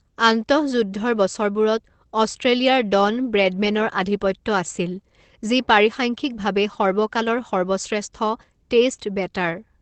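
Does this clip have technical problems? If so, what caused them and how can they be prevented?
No, no faults are audible.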